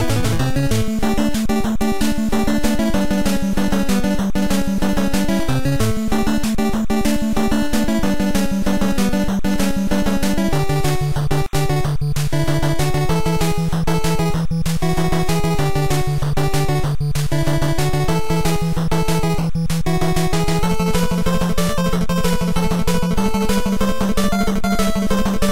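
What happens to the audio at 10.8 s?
A faint, steady chirping warble sits behind the sound, as it does throughout the clip: timecode bleed, with 29.97-frame linear timecode leaking in, switching between roughly 1 and 2 kHz.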